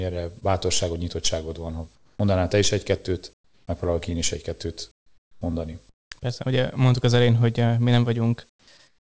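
Short concealed packet loss at 0.40 to 0.43 s in this speech recording over a call path: about 20 ms of audio never arrived in time, so the receiver stretched the preceding sound over the gap and crossfaded back, leaving a brief smear. Comfort noise in place of the background follows at 1.95 to 2.19 s (just before "te is"), 3.33 to 3.67 s (just before "megpróbálok én is"), 4.91 to 5.41 s, 5.89 to 6.11 s, 8.49 to 8.67 s, and from 8.87 s to the end. In each pause the real room tone gives way to a flat, featureless hiss, about 7 to 14 dB quieter, likely because the sender's voice detector halted transmission and the receiver synthesised filler noise.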